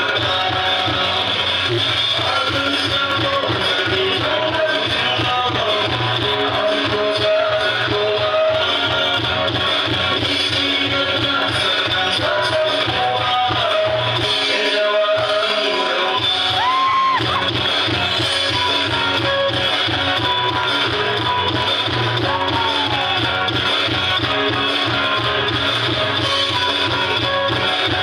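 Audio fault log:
Nothing to log here, there's not a single fault to point to anywhere in the clip.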